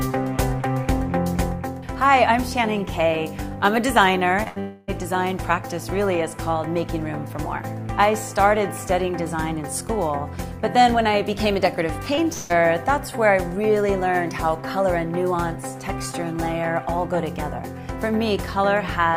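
Short concealed packet loss at 4.43–4.48 s: about 20 ms never arrived in time, so the decoder stretched the preceding sound across the hole, leaving a brief smear.

A burst of packet loss follows at 4.48–4.58 s. Some 80 ms are missing, bridged by a continued, fading copy of the last sound before the audio picks up further on.

A likely long network dropout runs from 4.60 to 4.90 s. The audio is replaced by a held continuation of about 280 ms that dims without falling into true silence, and the lost portion is skipped.

Another short concealed packet loss at 12.16–12.19 s briefly smears the sound where roughly 14 ms were filled in.

A second likely long network dropout at 12.33–12.52 s covers about 160 ms with a similar fading continuation before the audio returns.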